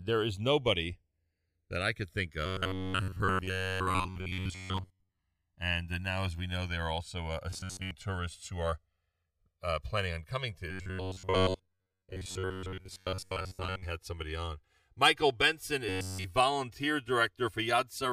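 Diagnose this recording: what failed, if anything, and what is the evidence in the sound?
The two channels drift apart across the whole recording, which points to the converter or clock stage: the two sides were captured on separately clocked devices. Their clocks differ by roughly 150 ppm, so the inter-channel delay grows steadily to about 3 ms by the end. Summed to mono, the resulting comb notches slide slowly through the spectrum, heard as a gradual flanging sweep. A fixed wiring offset would instead produce static notches.

Robotic sound from repeated short buffers appears at 2.46–5.19 s after "that I could think", at 7.50–7.91 s between "they are also uh" and "tourists who are", at 10.71–13.84 s between "planning on coming to" and "had somebody on", and at 15.89–16.26 s. Each stretch carries a rigid metallic buzz at 93.8 Hz, which fits a buffer about 10.7 ms long. The likely cause is driver or buffer starvation: the software loops the last block instead of passing new audio. 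Most of the real audio is lost to the repeats, and all of it at 15.89 s. A steady buzz pitch like this separates it from codec warbling, which has no fixed pitch.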